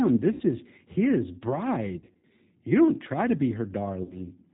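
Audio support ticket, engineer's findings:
G.729 codec, whole clip: band-limited sound, nothing above 4 kHz, rough and slightly synthetic texture. This fits an 8 kbit/s CELP coder rebuilding each 10 ms frame from a filter, a pitch predictor and sparse pulses. The graininess is what separates it from a simple low-pass.

VoIP packet loss concealed by the speech codec at 0.32 to 0.43 s (80 ms lost, before "is his"), 1.99 to 2.24 s (160 ms scattered over 240 ms, longest gap 60 ms) and 4.04 to 4.15 s (60 ms, after "don't try to be"). The decoder stretches its last pitch and filter into a fading buzzy tone or coloured noise, not silence or a click, and the sound stays weak afterwards.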